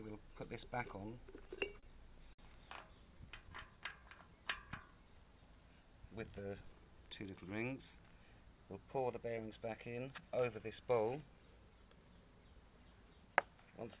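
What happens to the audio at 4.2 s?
At 4.2 s the sound is drawn out, playing at about 95% speed with its pitch unchanged, across 3.26–4.40 s, a jitter buffer slow-down. The receiver, short of reserve or raising its delay target, repeated pitch periods or pause fragments, adding 64 ms.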